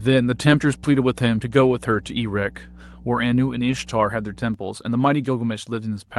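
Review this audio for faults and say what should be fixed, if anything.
Mains hum runs from 0.00 s to 4.54 s as a steady 60 Hz tone about 20 dB below the speech. It comes from a ground loop or nearby transformer coupling the power line into the signal. Unlike broadband rumble, it is a fixed pitch that stays constant through pauses. Fix it by breaking the ground loop, for example with balanced cabling or a ground-lift isolator, and by moving the signal path away from transformers.

There are two stretches of lost packets rebuilt from error correction, at 1.89–1.95 s and 3.67–3.77 s. The first covers about 40 ms of rebuilt audio, which fits two lost packets, and the second about 60 ms, which fits three. The decoder played the low-bitrate backup copies carried in the following packets, so the sound turns briefly rough and noisy instead of going silent. That sets it apart from plain loss concealment, which smears or repeats the previous sound. 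Prevent it by reducing packet loss on the network path, for instance with a wired connection or better routing.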